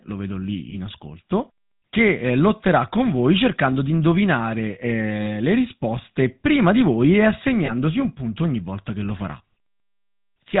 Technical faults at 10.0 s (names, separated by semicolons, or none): GSM full-rate codec